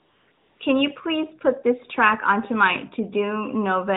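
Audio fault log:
0.00–0.28 s and 0.32–0.60 s, AMR comfort noise: the phone's silence detector judged the talker quiet and stopped sending speech frames for about 275 ms, then about 280 ms. The receiver filled both gaps with synthetic noise built from a rough estimate of the background's level and spectral shape. The real room sound gives way to a smooth, even hiss that drops out briefly around 0.3 s and then switches off as speech frames resume.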